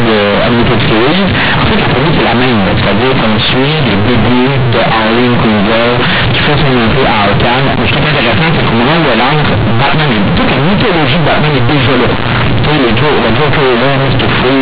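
From start to finish the speech suffers from companded audio read as linear: A-law bytes are being played as plain linear 8-bit samples with no expansion. Each sign change throws the output across about half its range, so quiet syllables come out as loud as stressed ones. The result is harsh, buzzy distortion, and the pauses fill with loud noise. Ordinary clipping or overdrive would leave the pauses quiet. The underlying telephone coding's 4 kHz band limit can still be heard beneath it.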